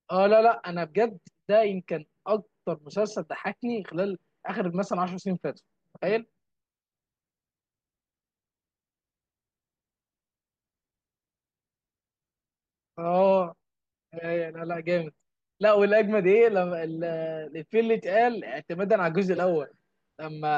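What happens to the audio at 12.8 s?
Nothing goes wrong at 12.8 s; the speech continues intact through that moment, with no dropout, click, glitch or other fault.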